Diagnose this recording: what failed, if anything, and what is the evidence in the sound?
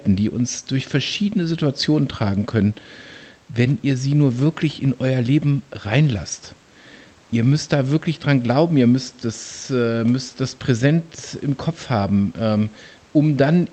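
Nothing failed here: the speech comes across a normal call path, with the light coding texture and top end stopping around 8 kHz that fit an Opus link at roughly 32 kbps, and the faint room noise about 35 dB under the speech belongs to the room, not the system.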